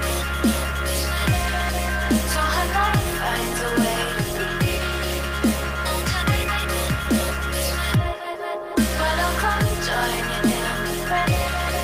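Nothing in this audio stands out as a technical fault; there's no glitch, dropout or distortion anywhere to point to.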